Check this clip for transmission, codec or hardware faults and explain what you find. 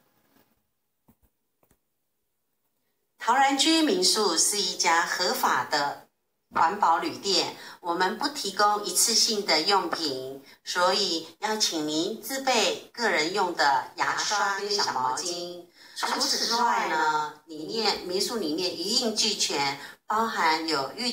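One fault is present. From 14.09 to 17.86 s, channel delay (doubling): one channel lags about 85 ms, consistent with a 4096-sample buffer. Summed to mono, it produces an equal-level slap echo.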